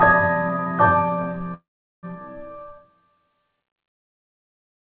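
From 1.54 s to 2.05 s the sound stalls into a brief fading buzz, then about 0.4 s of silence, before picking up exactly where it stopped with nothing lost. This call audio freeze likely came from delayed packets draining the jitter buffer, inserting roughly half a second of fill, all below the narrowband call path's 4 kHz ceiling.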